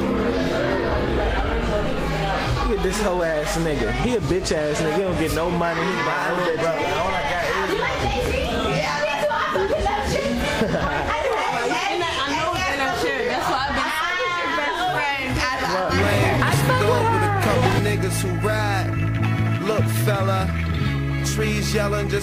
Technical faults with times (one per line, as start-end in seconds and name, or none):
none